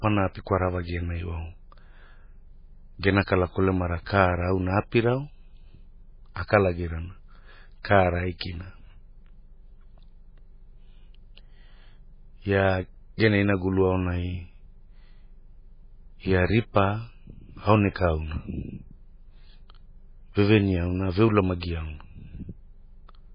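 From start to finish the speech carries heavy MP3 compression damage, likely from an encoder starved of bits at a very low bitrate. Nothing survives above 5.1 kHz, so the spectrogram shows a flat ceiling there, with sparse, flickering blocks beneath it. The sound is dull, watery and swirling, with smeared consonants.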